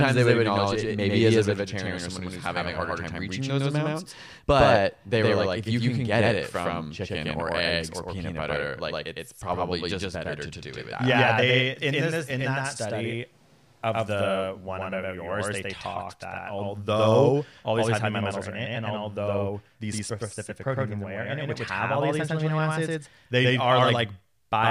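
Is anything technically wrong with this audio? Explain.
Yes. A doubled audio track runs through the whole recording: the speech is heard twice, with a second full-band copy trailing roughly a tenth of a second behind the first and at about the same level. This is likely the same signal reaching the mix through a second, slower path, or an edit leaving two copies out of step. Because the copy is clean, with no decay or room colour, it sounds like a flat, slap-back echo.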